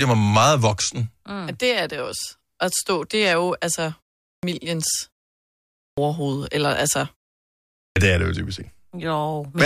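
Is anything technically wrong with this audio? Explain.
Yes. Clipped start after a pause occurs at 4.34 s, after "det er jo altså"; at 5.87 s, before "eller altså"; and at 7.85 s. The output device wakes late from silence, cutting 90 to 110 ms from the onset so the sound starts abruptly. Muted pauses, by contrast, lose no speech.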